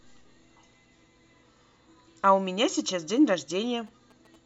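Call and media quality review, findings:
GSM signalling bursts, 3.16 to 4.36 s. Galloping ticks and short buzzes at about 217 Hz, well below the speech. Nearby 2G phone signalling. Audio input stage rectifying the radio bursts.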